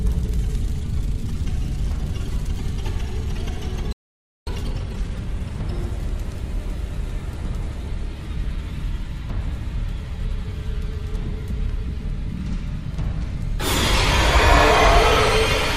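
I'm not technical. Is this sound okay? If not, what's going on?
No. At 3.93 seconds the sound cuts out and stays silent until 4.47 seconds, about half a second. This is a playback stall. The player most likely ran short of data, so nothing came out until it recovered.

Right after that, from 4.47 to 5.55 seconds, the sound rushes along at about 1.5 times normal speed. This is time-compressed catch-up. The player trims tiny slices to make up lost time. The pitch stays normal.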